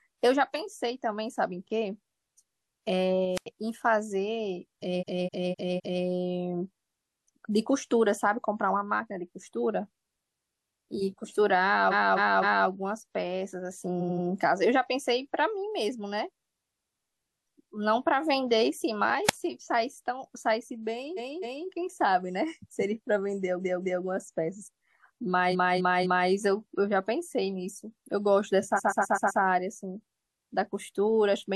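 At 3.35 s there's a wireless microphone squelch dropout: the radio link fades, a brief hiss swells, and the receiver's squelch shuts the audio off for about 88 ms before the speech comes back. Then from 4.99 s you get repeated frames, where the same stretch of compressed audio gets played again. Here a roughly 256 ms block loops four extra times, giving a stutter and adding about 1 s to the clip. More of these follow at 11.90 s (256 ms block, three extra plays) and 13.99 s (a short 85 ms chunk, three extra plays). There's a second, shorter squelch dropout at 19.28 s with about a 38 ms hole. After that come further repeats at 21.16 s (256 ms, twice more), 23.59 s (213 ms, twice more), 25.51 s (256 ms, three more) and 28.76 s, where a 128 ms block loops five extra times.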